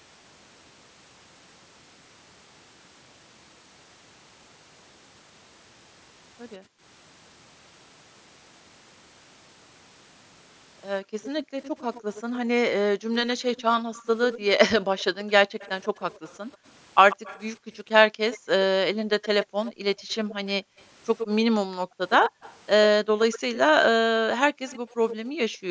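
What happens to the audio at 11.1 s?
From 11.03 to 11.16 s the echo canceller pulled the microphone down about 40 dB during loudspeaker playback, gating the background, so the room sound drops out.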